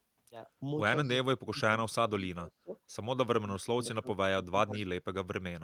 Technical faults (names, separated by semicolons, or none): echo leak; speech suppressed in double talk